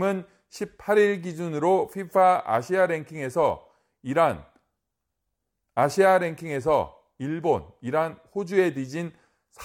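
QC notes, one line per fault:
0.25–9.56 s, clock slip clicks: faint, evenly spaced ticks run through the speech about every fifth of a second, some fifty in all, clearest on louder sustained sounds. Each is a single sample dropped or repeated, likely because two devices are running on separate, unsynchronised clocks that differ by something around 100 ppm. The mismatch builds up steadily until it reaches a whole sample, forcing a one-sample jump in the waveform that is heard as a tick.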